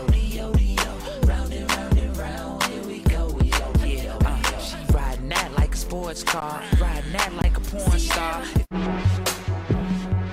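Twice the output buffer ran dry and the converter held its last sample value, an underrun with held sample, at 6.40 s for 16 ms and from 7.42 to 7.44 s for 20 ms. The sound freezes flat, and roughly as much live audio as the gap was lost each time.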